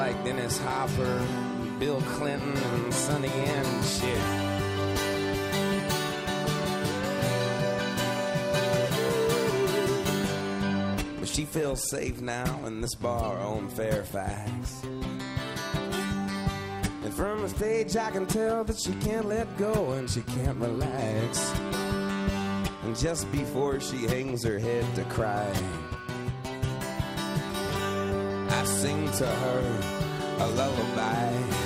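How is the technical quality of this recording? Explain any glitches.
The technical quality of this recording holds up, with no glitches to explain.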